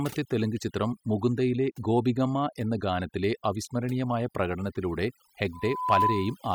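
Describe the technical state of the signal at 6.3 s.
At 6.3 s a loudspeaker feedback squeal is sounding, part of an event running from 5.52 s to 6.47 s. The microphone is picking up the loudspeaker it feeds, and at 1 kHz the loop gain passes one, so that frequency keeps reinforcing itself. The tone swells over roughly 0.4 s into a steady whistle sitting about 5 dB above the speech, and by 6.3 s it is fully established.

Underneath, overdone noise removal affects the whole clip, including this moment. The noise reduction is set too aggressively: frequency bands close to its noise estimate are pulled far down or shut off, and quieter parts of the speech are removed along with them. The background drops and breaks up into twinkling, warbling specks.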